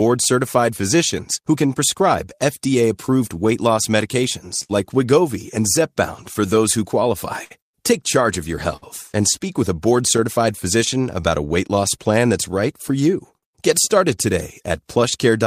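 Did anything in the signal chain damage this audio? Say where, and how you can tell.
Yes. Clock drift between sender and receiver runs through the whole clip, at the network and jitter-buffer stage. The sender's clock runs roughly 4% slow, so the receiver's buffer keeps draining, which accounts for the uneven hiccups heard throughout.

Repeated timing corrections run from 0.08 s to 15.38 s. The receiver repeats short pieces to keep its buffer from running dry, playing the speech at about 97% speed. In all, roughly 0.4 s is added, heard as slightly unsteady, dragging timing.

Scattered short gaps, the likely result of lost or late network packets, appear from 3.06 s to 10.20 s: about seven, the longest around 70 ms. About three more follow from 12.89 s to 14.72 s, the longest around 50 ms. Each was patched by extending the preceding sound, leaving brief smears and ticks.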